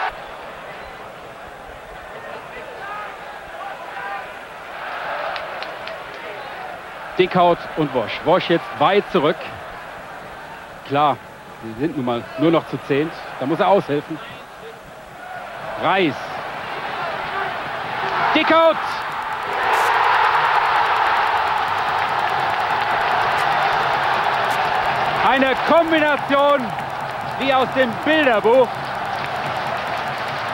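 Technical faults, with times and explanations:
18.91–30.54 s Wi-Fi interference: the audio circuit rectifies a nearby Wi-Fi beacon sent every 102.4 ms, adding faint ticking about ten times a second, roughly 30 dB below the signal.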